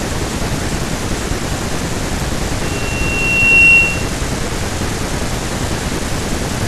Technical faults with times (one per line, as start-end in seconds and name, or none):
2.62-4.16 loudspeaker feedback squeal